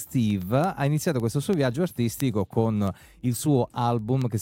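From 0.19 to 4.33 s, word clock ticks. Unlocked clocks slip by about 200 ppm. Sharp, uneven clicks recur roughly every tenth of a second.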